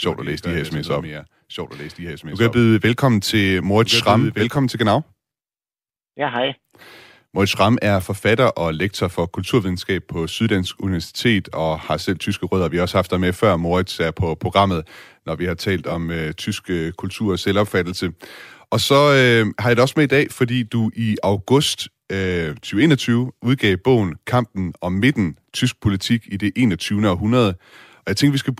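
From the very start until 4.56 s, just after "det altså noget mere", the speech is shadowed by a second, quieter copy, about 10 dB down and trailing by roughly a second and a half, which cuts off abruptly. This doubled audio track likely comes from a slower capture path or a misaligned edit.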